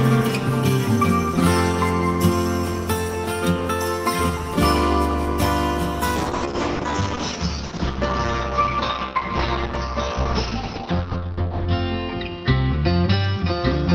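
From 6.16 s the audio turns dull and muffled, with everything above about 6 kHz gone, and it takes on a coarser, rougher texture that lasts to the end of the clip without clearing. This is a call bitrate drop: the bandwidth estimate fell and the encoder cut its rate from 32 kbps to 8 kbps, holding at that floor for 5.5 s. At 8 kbps Opus quantises more crudely and narrows the coded band from 20 kHz to 6 kHz.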